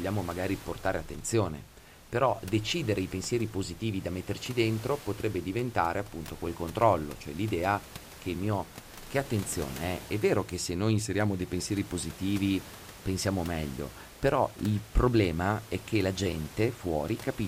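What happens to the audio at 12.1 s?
At 12.1 s the speech carries on intact, with only the room's own background noise sitting about 18 dB beneath it.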